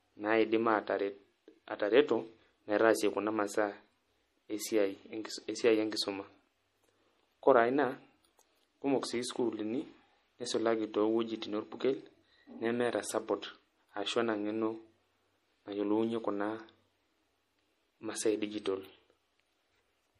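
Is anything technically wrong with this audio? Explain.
Yes. Throughout the speech there is plainly audible MP3 compression: nothing above 15.3 kHz, watery swirling and smeared consonant attacks, likely from a bitrate around 40 kbps discarding weak frequency lines.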